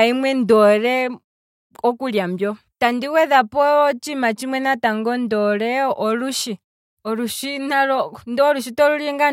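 No technical faults can be heard anywhere in the speech. In the pauses the background fades down to silence and comes back in time for the next sound, with nothing of the speech cut off.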